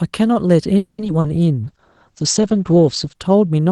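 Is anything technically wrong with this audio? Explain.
Yes, there are three kinds of fault, all from the call's transport and coding.

From 0.77 to 1.00 s there is a call audio freeze, most likely because packets were delayed and the jitter buffer ran dry. The receiver stretches the last sound into a fading buzz, with about 70 ms of silence, before the audio resumes where it stopped. Nothing is lost, but everything after it arrives about 210 ms late. That added delay is what separates it from packet loss.

Short concealed packet loss follows at 1.04 to 1.07 s, 1.07 to 1.10 s and 1.20 to 1.26 s. Here audio really went missing, about 20 ms in each of the first two and about 40 ms in the third. The decoder extrapolated from the preceding sound and blended back in, which is heard as brief smears or wobbles. Unlike the freeze, these gaps add no delay, and some of the original sound is gone.

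From 1.65 to 3.21 s a call bitrate drop takes the Opus stream from 32 kbps down to 9 kbps, where it stays for about 1.4 s. The encoder codes more coarsely and narrows the audio bandwidth from 12 kHz to 8 kHz, so the sound turns muffled and watery. It is a sustained change in tone, not a momentary glitch, which separates it from concealment.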